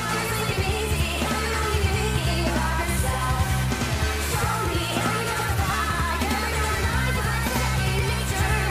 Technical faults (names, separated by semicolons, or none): channel delay (doubling)